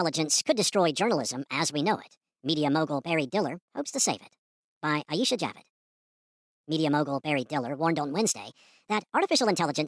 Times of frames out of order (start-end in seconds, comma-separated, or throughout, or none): none